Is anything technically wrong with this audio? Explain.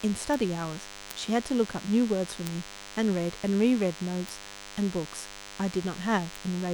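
Yes, there are two faults in this speech clip.

DECT cordless phone buzz runs from start to finish. A nearby DECT handset or base station transmits a brief radio burst every 10 ms, and something in the audio chain rectifies that energy into the signal path. The result is a thin, constant buzz at 100 Hz with a dense stack of harmonics above it, sitting roughly 15 dB below the speech.

Bit error spikes occur at 0.34, 1.11, 2.47, 4.29 and 6.36 s. Each is a single corrupted sample: one bit flipped in memory or on a digital link, so the value leaps by a power of two and snaps straight back. Each is heard as one sharp, broadband tick with no relation to the speech around it. The ticks at 1.11 and 2.47 s peak at about −9 dBFS, and the other three at about −15 dBFS.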